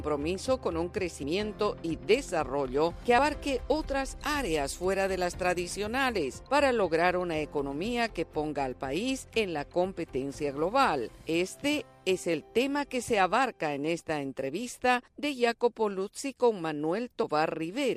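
Two quick hiccups at 1.23 s and 3.18 s are compressed frames skipped. Each time the audio jumps ahead by roughly 70 ms, about two of its 32 ms frames. From 4.18 s to 6.18 s it turns thin, bright and sibilant because pre-emphasis was left on. That's the CD-style 50/15 µs treble boost with no matching de-emphasis, so highs sit about 8 dB hot at 10 kHz relative to 1 kHz.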